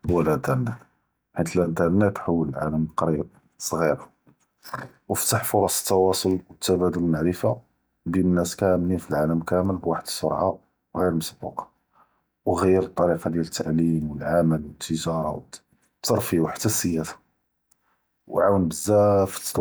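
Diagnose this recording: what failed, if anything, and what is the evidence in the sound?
Nothing in this speech recording points to a failure at any stage of the chain, so there's simply nothing to diagnose here.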